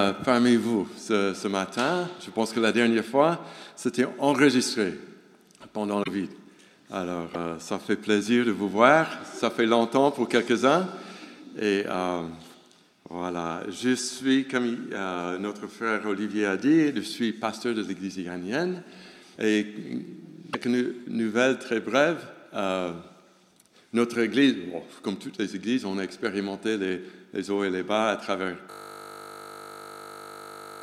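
Short glitches at 6.02–6.08 s, 7.33–7.36 s, 19.35–19.38 s and 20.52–20.55 s are most likely a broken MP3 bit reservoir: after dropped frames, the decoder reads borrowed bytes from the wrong frame, so the sound skips forward with a brief glitch roughly one to two 26.1 ms frames long.

From 28.71 s to the end, a system hang loop repeats one 20 ms slice of audio about 106 times. The sound hardware keeps replaying its ring buffer while the system is frozen, which produces a steady 50 Hz buzz instead of continuing audio.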